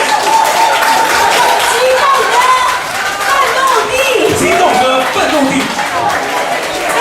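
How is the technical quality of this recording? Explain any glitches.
The recording has one technical fault. Hard clipping runs throughout: peaks are driven about 4 dB past what the signal path can pass, so only a small fraction of samples get sliced flat, adding brief crackle on the loudest moments.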